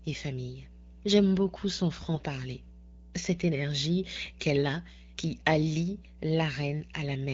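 From the start and continuing throughout, mains hum sits under the speech: a steady 60 Hz tone with low harmonics, roughly 20 dB below the signal, from power-line coupling such as a ground loop. Unlike rumble or handling noise, its pitch and level never waver.

Between 2.14 and 2.23 s, AMR bit errors briefly roughen the speech into a hoarse, gargly scratch while pitch and loudness hold. Flipped low-priority bits, across what sounds like a few frames at a few percent error rate, misplace the excitation pulses. Unlike packet loss, nothing drops out or is smoothed over.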